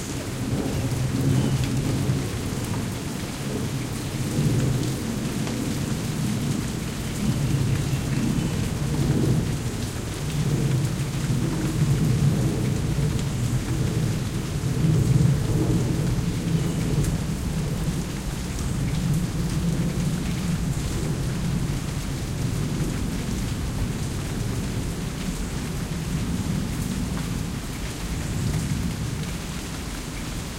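Nothing here trips any alarm; the sound just runs along with no glitch, dropout or distortion to point to anywhere in it.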